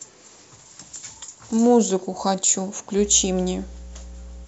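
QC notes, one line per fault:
2.96 to 4.47 s, mains hum: a steady 60 Hz drone comes in partway through and runs to the end, sitting fairly loud under the speech. That's the power line bleeding into the signal, from a ground loop or a transformer sitting too close.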